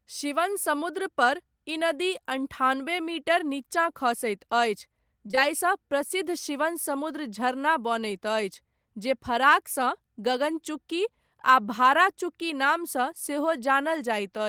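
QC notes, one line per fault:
5.27 to 5.39 s: short concealed packet loss, three consecutive gaps of about 20 ms each in the speech. The decoder extended the preceding sound across each hole before blending back, so this stretch comes across as a brief smear or wobble.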